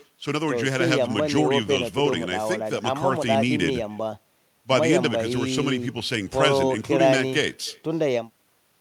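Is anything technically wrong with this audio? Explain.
Yes. Echo with no canceller runs throughout this speech recording. The far end is playing the call over a loudspeaker, and its microphone picks that sound up and sends it straight back with nothing to subtract it. After roughly 300 ms of round trip through the network, every phrase returns as a faint copy, about 28 dB below the direct speech. That copy sounds thinner, a quiet shadow trailing each syllable.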